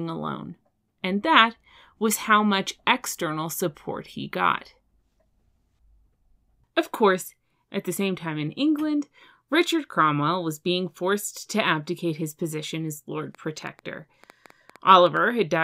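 A train of clicks runs from 13.35 to 15.18 s: about ten similar pulses, roughly six per second at an uneven pace, peaking near the level of the speech itself. It is likely interference or a faulty connection or power supply, and it is heard as irregular ticking over the sound.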